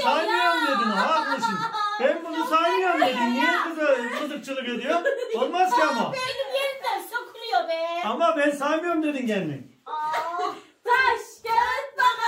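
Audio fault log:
Nothing to log here; I didn't catch anything going wrong anywhere in the audio.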